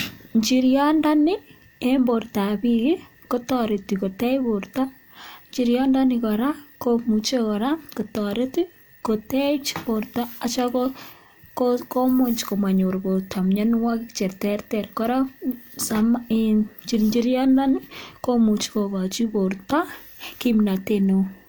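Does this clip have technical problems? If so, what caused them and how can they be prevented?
No, there are no technical problems to point to in this speech recording. Nothing here needs a cause traced or a preventive step.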